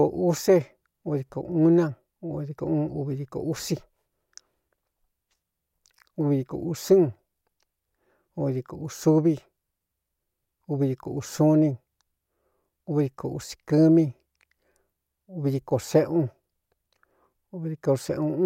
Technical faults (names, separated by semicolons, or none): none